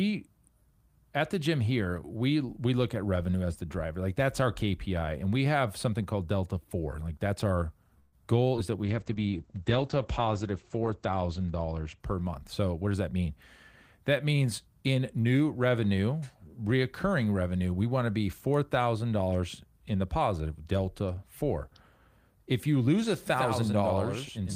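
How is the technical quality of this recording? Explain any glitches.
The recording has several call-transport glitches between about 8 and 13 seconds, plus a doubled track at the end.

At 7.99 to 8.15 s, just after "that's our", there is a call audio freeze. Packets were likely delayed, so the receiver stretched the last sound for 130 ms. Nothing is lost.

At 8.56 to 8.60 s, after "that's our goal", short concealed packet loss drops 40 ms of audio. A brief filled continuation smears over the hole.

From 8.87 to 12.60 s, a call bitrate drop takes the encoder from 32 to 10 kbps. Bandwidth falls from 20 kHz to 8 kHz. The sound turns muffled and rough, worst for about 2.2 s.

From 12.32 to 13.26 s, a jitter buffer speed-up plays the audio at 112% speed. It trims roughly 150 ms of excess buffering, so speech sounds hurried at unchanged pitch.

From 23.30 s to the end, after "if you lose a", a doubled audio track appears. 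A second copy about 5 dB quieter trails by roughly 100 ms and starts abruptly.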